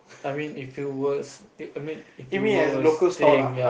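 A short speech recording with a microphone volume stepped up fault at 3.27 s, where the level jumps by about 4 dB in a single step. The call software judged the input too quiet and raised the device's capture volume at once, so the voice and the background noise get louder together. A talker simply speaking up would lift only the voice, and a smooth gain-control ramp would rise gradually, not in one clean step.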